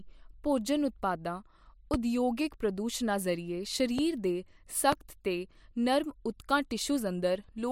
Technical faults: loud pop

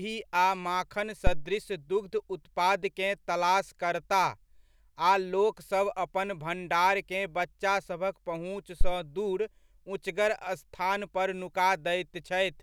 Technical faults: phantom power thump

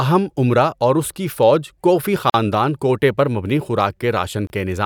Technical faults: gap at a join of encoded pieces

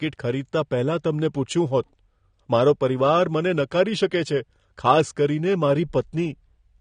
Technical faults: AAC compression

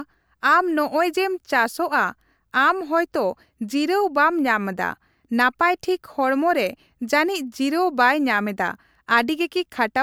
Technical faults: none

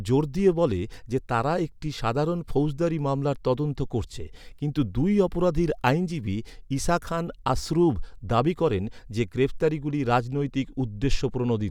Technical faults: none

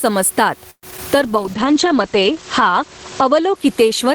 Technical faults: gain pumping; call audio freeze; short concealed packet loss; call bitrate drop

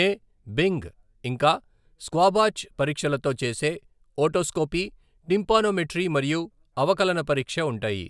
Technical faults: none

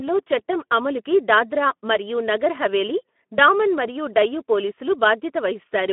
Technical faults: Speex codec

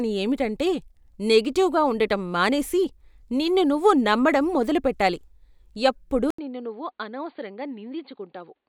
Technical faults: input switched to a poorer device

